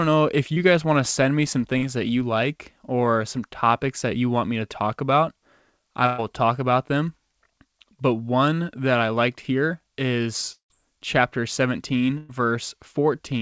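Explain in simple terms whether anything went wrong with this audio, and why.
A few things went wrong, all of them the kind of glitch you get when a call's audio doesn't make it across the network cleanly. The sound came through a call connection that tops out at 8 kHz, which is why it lacks the crisp top end of a studio recording.

First, short concealed packet loss, at 0.54 to 0.58 s and again at 1.78 to 1.84 s. Tiny pieces of the audio, about 20 ms and then about 40 ms, never arrived in time. The receiving end papered over each hole by stretching out the sound just before it, so you hear a quick smear or little wobble rather than a clean gap.

Next, two bursts of packet loss, at 6.06 to 6.20 s and 12.18 to 12.31 s. Each time roughly 120 ms went missing in one go. The receiver kept extending the last bit of sound, so it turns into a short buzzy or hissy hold that fades before the real audio picks up again, with the piece in between simply gone.

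Finally, at 10.52 to 10.72 s there's a longer hole of about 180 ms. The sound gets stretched and fades, then there's about a tenth of a second of silence before the audio resumes. That pattern points to a likely long network dropout, where nothing arrived for a stretch and the receiver ran out of sound to fill it with.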